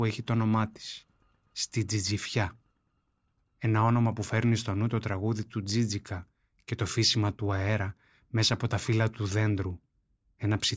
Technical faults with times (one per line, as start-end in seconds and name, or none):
none